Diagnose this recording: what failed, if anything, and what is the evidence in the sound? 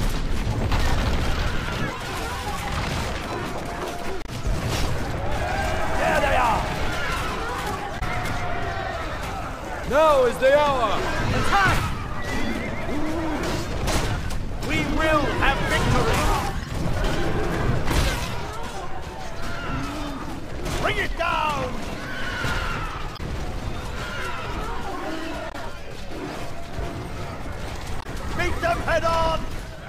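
The codec stage failed, from damaged data in a compressed stream. Five short disruptions break in, each about 70 ms long. They fall at 4.22–4.29 s, 7.96–8.02 s, 23.13–23.20 s, 25.48–25.55 s and 27.99–28.06 s. Each is a brief disruption, unlike the material around it. Corrupt bytes reached the decoder. It misread those frames, lost sync, and produced junk until it found a valid frame header again.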